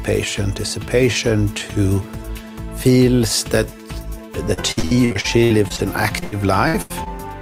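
From 4.53 to 7.08 s, repeated packet loss (robotic sound): sixteen short dropouts, longest about 81 ms, each patched by extending prior sound, giving choppy breakup.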